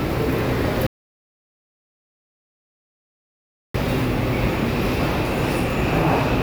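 A short sound recording with an audio dropout to silence from 0.87 to 3.74 s, nearly 2.9 s of dead silence, likely a lost input or mute.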